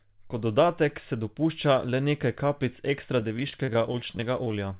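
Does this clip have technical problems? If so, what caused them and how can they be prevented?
Yes. Just after "dopušča le nekaj kapljic", from 3.2 to 4.54 s, there's repeated packet loss (robotic sound): about twenty short holes, none longer than 24 ms, each patched by stretching the previous sound, so roughly a fifth of that stretch turns choppy. A steadier network path or a deeper jitter buffer would prevent it.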